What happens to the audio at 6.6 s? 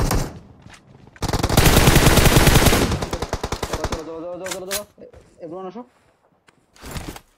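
Nothing goes wrong at 6.6 s; the audio plays through that moment intact, with no dropout, click or other fault.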